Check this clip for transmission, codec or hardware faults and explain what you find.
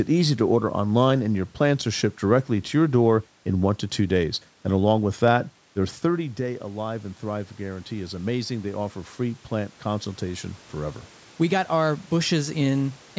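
Two faults turn up here: a steady ticking through nearly the whole clip, and a gain swell in the second half.

From 0.40 s to 12.94 s there's a click every 0.70 s, about twenty in all, while there's signal. It's likely clock drift buffer slips: two clocks a few hundred ppm apart, so every so often a handful of samples gets dropped or doubled, and each slip ticks.

Then automatic gain rising kicks in from 5.76 s to 11.05 s. The level drops about 12 dB around 6 s as the talker backs off the mic, and the AGC slowly pulls it up by about 8 dB, so voice and room noise swell together over several seconds.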